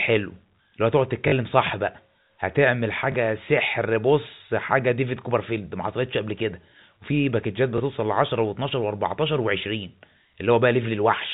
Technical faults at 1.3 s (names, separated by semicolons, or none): packet loss with last packet repeated